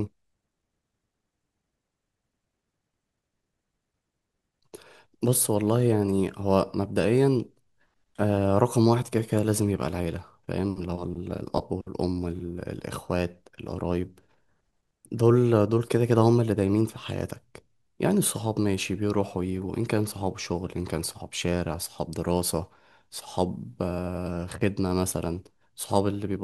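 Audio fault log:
No audible faults detected.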